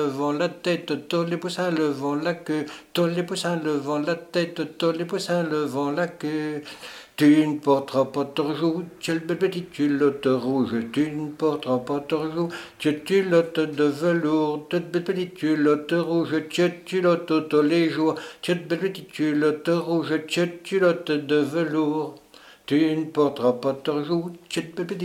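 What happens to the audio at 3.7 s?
Nothing goes wrong at 3.7 s; the audio plays through that moment intact, with no dropout, click or distortion.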